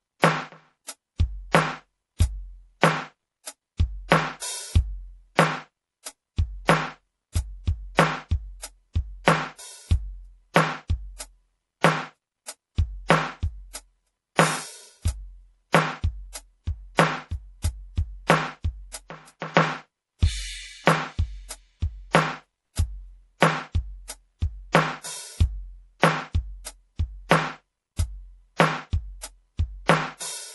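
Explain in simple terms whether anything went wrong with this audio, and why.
The music was most likely squeezed with MP3 compression at a setting too stingy for its complexity, so the encoder had to throw away detail throughout all 30 seconds. It removed everything above about 11.5 kHz, leaving the top end dull and airless, and it kept switching faint parts of the sound on and off from moment to moment. That leaves a plainly audible watery, swirling texture, with sharp attacks sounding smeared rather than crisp.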